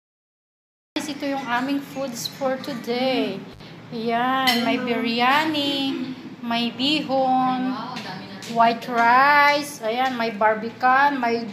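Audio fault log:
0.00–0.96 s, cut-off start: the file is digital silence until about 0.96 s, then the sound jumps in mid-stream with no attack or fade, since capture began late.
3.51–3.60 s, intermittent contact: the signal drops out for about 65 ms with crackle at each edge and faint hiss in the gap, as a loose plug or cable briefly opens.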